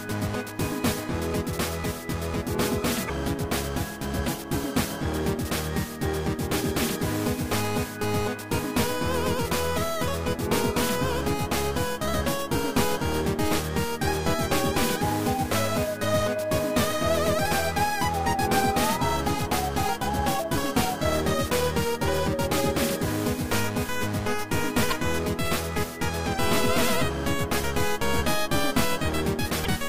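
Damaged data in a compressed stream shows up at 3.05–3.10 s, 24.90–24.93 s and 29.61–29.67 s: corrupted frames throw the decoder off sync, leaving short chirps, squawks, clicks or brief holes.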